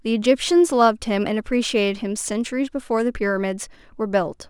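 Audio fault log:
throughout, sample clock jitter: the converter's clock wanders by roughly a microsecond or two, so each sample lands slightly off time. The timing error scales with how steeply the waveform moves, leaving a faint hiss, about 40 dB down, that thickens on loud and bright speech and disappears in pauses.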